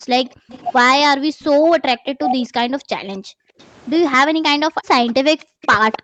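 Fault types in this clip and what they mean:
Speech suppressed in double talk: The voice drops sharply, by about 40 dB at its deepest, while the far side is also talking. It happens at 0.0 to 0.09 s, again from 1.02 to 2.42 s, and briefly at 4.73 s. The middle stretch loses the most, with dips adding up to well over half a second. The likely cause is an echo canceller that could not tell its own talker from loudspeaker echo, so it turned both down.
Background gated by the echo canceller: The room sound under the voice suddenly sinks, by about 40 dB at most, and then comes back. A short dip sits at 0.37 to 0.49 s. A longer, broken run spans 3.18 to 5.62 s, with about 0.7 s of drops in total. The canceller clamped the microphone hard while the loudspeaker was playing, then released it, so the background sound pumps in and out.
Echo leak: A delayed copy of the voice follows the speech 259 ms later. 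It appears from 0.5 to 1.49 s, 3.12 to 4.15 s, and 5.07 s to the end. It starts faint, well below the speech, grows stronger in the second stretch, and is louder still in the last, about 10 dB below the speech. This is likely a speakerphone whose canceller let part of its microphone pickup through, so the echo was sent back.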